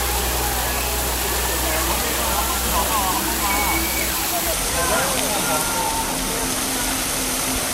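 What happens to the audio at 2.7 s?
Nothing goes wrong at 2.7 s; the audio plays through that moment intact, with no dropout, click or other fault.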